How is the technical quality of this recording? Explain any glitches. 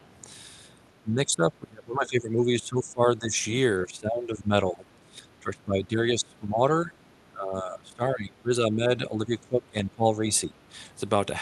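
The speech keeps getting ducked in and out, which sounds like speech suppressed in double talk. It happens at 1.02–3.36 s, 3.8–6.62 s, 6.81–6.93 s, 7.28–10.23 s and 10.45–10.73 s, with level dropping by about 20 dB (only about 10 dB in the short 6.81 s one). The likely cause is an echo canceller that couldn't tell this talker from the far end's loudspeaker echo while both spoke, so it pulled everything down. Underneath, the call codec's top end stops around 12 kHz.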